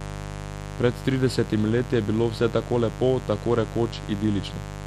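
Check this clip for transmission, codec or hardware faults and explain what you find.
A mains buzz runs under the speech for the whole clip. It is a steady, raspy buzz, fairly loud at around 10 dB below the speech. Its harmonics build on a 50 Hz fundamental. Sharp switching spikes, twice per mains cycle, from a dimmer, rectifier or unshielded lead, are leaking into the signal and spread energy up into several kHz.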